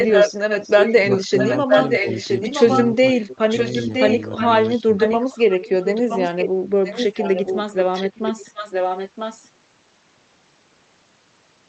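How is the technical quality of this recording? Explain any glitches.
The recording has two call-related faults: a delayed echo of the speech running through most of the clip, and several short moments where the speech itself is pushed down.

Echo leak, from 0.0 to 6.49 s and again from 6.84 to 9.5 s. A copy of the speech returns about 0.97 s late, only a little quieter than the original, so the two overlap audibly. The likely cause is a far end playing the call on a loudspeaker whose echo canceller let part of its microphone pickup pass back.

Speech suppressed in double talk, at 1.06–2.06 s, 2.93–3.52 s and 4.79–4.99 s. The speech drops sharply, by roughly 20 dB in the first two spans and somewhat less in the third, over stretches of a few hundred milliseconds. It sounds dipped or partly cut out. The likely cause is an echo canceller that could not tell the talker from the returning echo while both were present, and turned everything down together.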